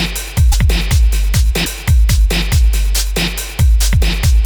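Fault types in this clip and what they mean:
Broken MP3 bit reservoir: two short glitches about one 26 ms frame long, likely dropped frames leaving the next one reading another frame's bytes.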